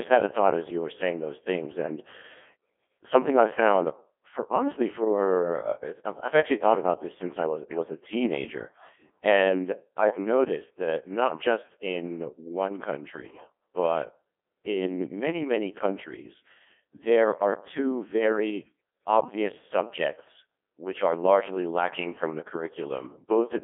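Codec 2 vocoder damage runs throughout: the speech is rebuilt from sine waves, sounding heavily robotic and buzzy, band-limited to about 250 Hz–3.5 kHz, consistent with roughly 1.2 kbit/s.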